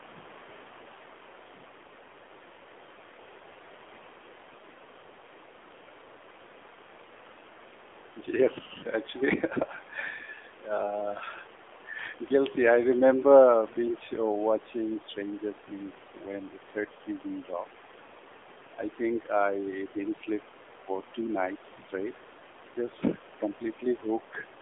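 A speech clip carrying AMR narrowband mobile codec damage throughout. Sound is confined to about 300 Hz to 3.5 kHz. The buzzy, synthetic quality fits a low 7.4 kbps mode.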